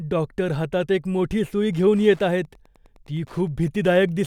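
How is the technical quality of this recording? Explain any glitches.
The recording has one fault: Wi-Fi interference, from 1.56 s to the end of the clip. The audio circuit picks up and rectifies the beacon from a nearby Wi-Fi radio, sent every 102.4 ms. This adds a faint, steady ticking about ten times a second, well below the speech.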